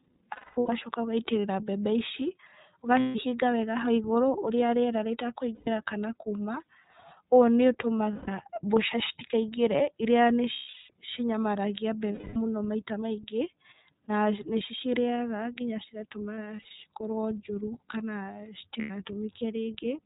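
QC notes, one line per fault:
Throughout: iLBC codec. The speech is band-limited with nothing above 4 kHz, so it sounds narrowband and telephone-like. Each 30 ms frame codes its excitation on its own, without reference to the frame before. That leaves a rough, slightly synthetic texture on the voice, which is plainly audible here. The coarseness points to the 13.33 kbps mode that goes with 30 ms frames. Sibilants and breath lose their upper detail.
0.32–0.70, 3.00–3.16, 5.55–5.68, 8.13–8.29, 10.52–10.90, 12.12–12.37, 16.35–16.71, 18.81–18.91 s: lost iLBC frames. The decoder fills each gap by repeating the last pitch cycle mixed with noise. It sounds like a held, buzzy or breathy vowel. The longest gaps run about 0.33 to 0.36 s, at 0.32 and 10.52 s. At 0.32 the losses are scattered, with the longest run near 0.2 s. At 16.35 they are brief and spread over 0.36 s. Speech recovers almost at once after each gap.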